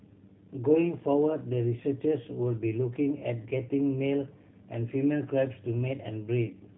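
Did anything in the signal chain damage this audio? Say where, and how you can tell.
Yes. The damage happens at the codec stage, and it runs through the whole clip. This is G.729 coding. Nothing above 3.8 kHz survives, so the speech sounds boxed-in and dull. The voice is also plainly rough and synthetic. That fits an 8 kbit/s codec. It does not send the waveform. It sends a vocal tract filter, a pitch predictor and a few pulses per frame, and the decoder rebuilds an approximation from them.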